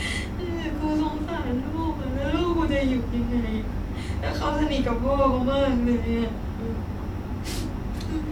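Nothing goes wrong anywhere in this bit of speech, so there's no technical fault to point out.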